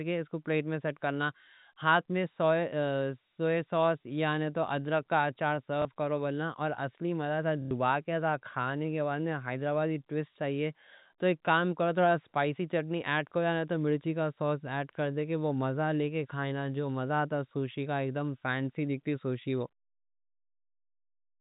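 Packet loss with the last packet repeated occurs in speech at 5.82–5.85 s and 7.62–7.71 s. Replayed audio fills each gap, and the longer run buzzes at about 33 Hz, which fits 30 ms packets. This is carried over G.711 A-law telephone coding.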